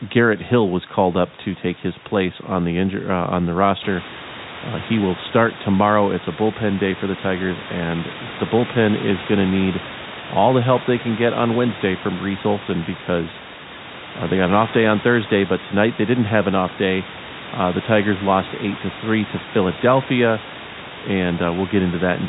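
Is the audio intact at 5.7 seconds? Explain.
Yes, the audio is intact at 5.7 seconds, with nothing there beyond the room's own background noise and the narrow band of telephone coding.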